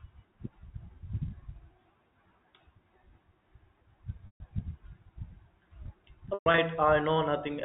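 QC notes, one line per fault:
4.26–4.40 s and 6.34–6.58 s, packet loss with pitch repetition: 140 ms lost in one block, then 160 ms scattered over 240 ms (longest gap 120 ms). The last pitch period is repeated, giving a held, buzzy tone that fades instead of the abrupt silence or clicks of plain dropouts.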